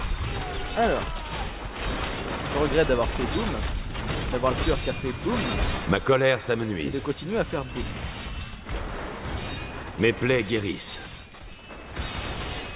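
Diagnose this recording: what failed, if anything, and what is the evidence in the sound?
No stage in the chain shows a failure: the signal stays continuous and stable throughout, with nothing in the sound that points to a problem in wiring, conversion, buffering, transmission, storage or playback.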